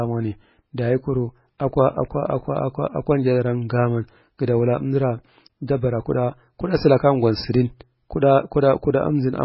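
Throughout the speech, nothing is present above 5.5 kHz, and the sound is heavily watery and swirly, with chirpy, metallic s sounds and smeared onsets. The likely cause is MP3 compression at a very low bitrate, around 16 kbps. The encoder has cut the treble and starved weak frequency lines of bits, so they flicker on and off. A spectrogram would show a hard ceiling at 5.5 kHz and patchy, blocky holes beneath it.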